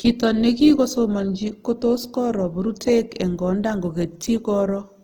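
Speech, with plainly audible Opus compression damage throughout: voiced sounds turn rough, grainy and noisy rather than swirly, while the spectrum still extends to about 20.2 kHz. This likely comes from Opus in its music mode at a low bitrate, consistent with roughly 16 kbps.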